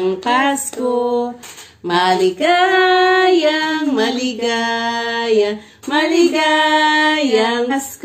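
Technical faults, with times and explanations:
1.07–1.12 s and 7.67–7.72 s, damaged data in a compressed stream: each fault is a roughly 50 ms burst where the encoded bytes were wrong, so the decoder misread or rejected those frames, lost sync and hunted for the next valid frame header. The result is a short chirp, squawk, click or hole breaking into the sound. On a spectrogram, each shows as a narrow vertical break. On the waveform, it is a brief irregular patch with abrupt edges.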